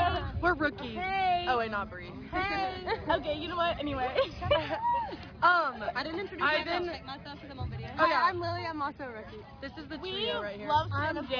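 Nothing technically wrong can be heard in this audio. No event stands out at any point, so there are no times or causes to report.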